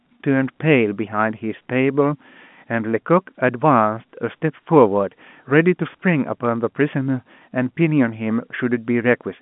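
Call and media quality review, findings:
Nothing stood out on listening to this speech, which comes through a G.711 A-law telephone line at 64 kbps with its usual band of about 150 Hz to 3.5 kHz and nothing above 3.8 kHz.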